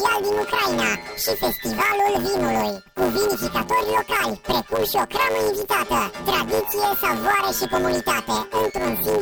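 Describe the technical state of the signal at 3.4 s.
At 3.4 s the signal is affected by planar audio read as interleaved, a fault that runs through the whole clip. Each 10 ms block stores all left samples and then all right, but it is read as alternating pairs, so each block plays twice at double speed, left then right. With blocks this short the result is a robotic buzz at 100 Hz. Unlike a sample-rate mismatch, there is no clear octave shift and the pacing stays correct.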